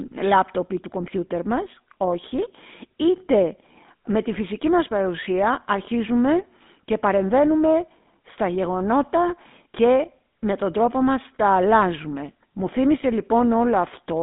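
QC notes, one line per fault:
Throughout, GSM full-rate codec: the speech has a buzzy, gravelly roughness and a narrow, boxy tone, with nothing above about 3.6 kHz or below about 200 Hz. A vocal-tract model driven by coarse, regularly spaced pulses causes this, consistent with 13 kbps GSM.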